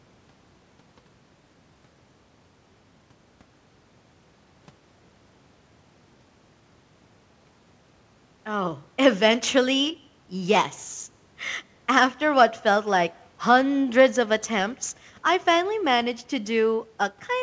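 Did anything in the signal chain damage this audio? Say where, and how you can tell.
No, nothing in the chain damaged this speech; the main mark the chain leaves is a band limit with nothing above 8 kHz, which fits a wideband G.722 call path at 64 kbps working as intended.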